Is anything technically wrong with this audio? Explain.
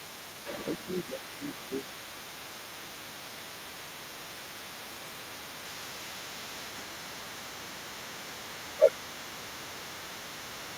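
Yes, there are two problems. The other side's voice leaking through runs from 0.0 s to the end: a second voice sits roughly 10 dB under the main speech, likely because the echo canceller left loudspeaker pickup in the microphone signal.

Speech suppressed in double talk occurs from 1.04 to 6.05 s, 6.91 to 8.29 s, and 8.91 s to the end. While both sides talk, the canceller likely cannot separate them and attenuates everything, so the main voice dips by up to about 10 dB, totalling around two seconds in the first stretch and under a second in the second.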